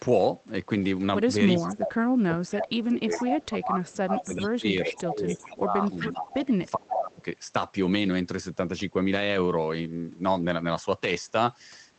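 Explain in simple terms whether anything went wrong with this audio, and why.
Two things go wrong here. From 1.58 to 7.21 s there's speech suppressed in double talk: the voice keeps dipping and fading, sometimes deeply. Most likely both ends spoke at once, and the echo canceller, unable to tell the talker from the loudspeaker sound, turned everything down.

There's also echo leak, a delayed copy of the voice arriving about 0.4 s late, at 1.68 to 1.89 s, then 2.54 to 5.44 s and 5.99 to 7.23 s. The far side is likely on a speakerphone whose canceller didn't catch everything its microphone heard.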